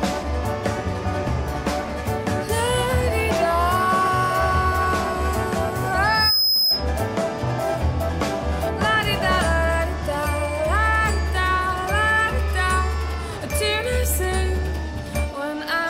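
A loudspeaker feedback squeal kicks in at 6.04 s and runs to 6.87 s. A single 5.1 kHz tone swells up over roughly a third of a second to sit about 5 dB above the rest of the sound. The mic was hearing its own speaker, and the loop gain at that frequency went past one.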